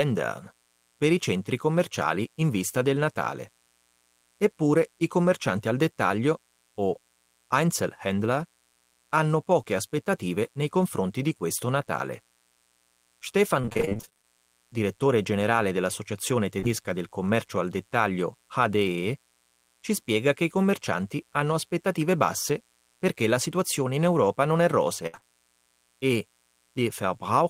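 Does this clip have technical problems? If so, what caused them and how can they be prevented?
Yes. There are four kinds of fault.

Mains buzz runs through the whole clip as a steady, raspy buzz about 40 dB below the speech. It is built on 60 Hz and its harmonics. Sharp switching spikes from a dimmer, a rectifier or an unshielded cable enter the signal twice per mains cycle, so the harmonics climb well into the kilohertz range. That gives a gritty edge rather than a pure low hum. Unlike the network faults below, it never stops or changes. To prevent it, use shielded, balanced cabling and keep audio gear off circuits shared with dimmers or switching supplies.

Repeated packet loss (robotic sound) affects 13.61 to 14.26 s. Short gaps, none longer than 25 ms, follow one another closely, and about half of that stretch is filler. Each hole is patched by extending the last bit of sound, and the next hole arrives almost at once. 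The speech turns choppy and metallic with pieces missing. What sets it apart from the isolated faults is the sustained, mechanical texture over more than half a second. To prevent it, use a more stable connection with a larger jitter buffer and forward error correction.

Short concealed packet loss occurs at 16.60 to 16.64 s, 16.64 to 16.67 s, 25.15 to 25.19 s, and 25.19 to 25.23 s. Each one drops about 20 ms, which fits the loss of a single 20 ms packet. The receiver continues the preceding sound and then blends back into the real audio. Each one is heard as a brief smear or wobble. To prevent it, reduce network jitter and congestion, or enable redundancy in the codec.

A burst of packet loss hits at 25.07 to 25.15 s, where about 60 ms goes missing in a row. The concealment holds the last sound and turns it down as the gap lengthens. The result is a held buzz or fading hiss, after which the speech jumps ahead with material lost. 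It is longer than the single 20 ms patches that follow it. To prevent it, add forward error correction and give the stream priority over other network traffic.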